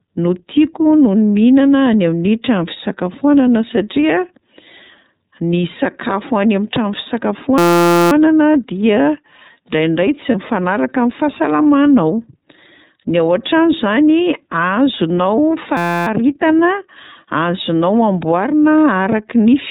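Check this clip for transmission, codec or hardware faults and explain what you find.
Three faults are audible: iLBC codec damage throughout, a system hang loop twice, and one burst of lost iLBC frames.

The whole clip carries plainly audible iLBC codec damage. Each 30 ms frame is coded on its own, at a rate that fits the 13.33 kbps mode. Nothing above 4 kHz survives. The speech sounds narrowband, slightly rough and synthetic.

A system hang loop occurs from 7.58 to 8.12 s and again from 15.77 to 16.07 s. The computer stalled while the sound hardware kept replaying one tiny buffer, which fits a 256-sample buffer. A 5.8 ms slice repeats at 172 Hz, heard as a steady buzz. Almost no audio is lost.

Lost iLBC frames occur from 10.30 to 10.35 s, which fits a single missing 30 ms frame. The decoder filled the gap by repeating the last pitch cycle mixed with noise. It sounds like a brief, buzzy held vowel. 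The speech recovers almost immediately afterwards.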